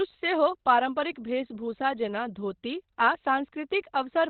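Throughout, the speech sounds muffled and hoarse, with nothing above 4.2 kHz, likely heavy Opus compression in its SILK mode, fitting a bitrate near 12 kbps.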